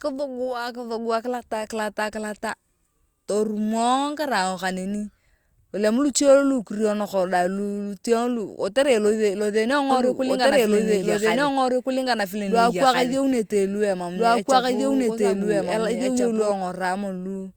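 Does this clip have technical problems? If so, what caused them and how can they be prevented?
Yes. A doubled audio track runs from 9.91 s to 16.51 s: a second copy of the speech, about as loud as the original, trails it by roughly one and a half seconds. The copy is full-band and dry, with no decay or room colour, and it starts and stops abruptly. This is likely caused by the signal being captured twice, once through a slower path such as a monitoring or loopback route, or by an edit that left two out-of-step copies layered. To prevent it, route each source into the recording only once and check edits for stacked duplicate regions before export.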